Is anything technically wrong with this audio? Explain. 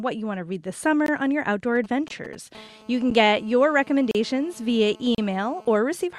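Yes, the speech has three kinds of fault.

Gaps between stream segments at 1.06–1.08 s (between "want to read this" and "on your outdoor"), 2.08–2.10 s, 3.10 s, 4.11–4.15 s and 5.15–5.18 s: mistimed one-second segments leave holes of 10 to 36 ms, filled with hard-edged silence, about once a second.

GSM signalling bursts from 1.75 to 2.35 s, just after "on your outdoor": a nearby 2G phone's sporadic radio bursts get rectified, producing galloping ticks and brief 217 Hz buzzes roughly 20 dB below the speech.

GSM phone buzz from 2.55 to 5.77 s: a phone in a call transmits steadily 217 times a second, and the rectified pulses give a raspy, harmonic-rich 217 Hz buzz about 27 dB down.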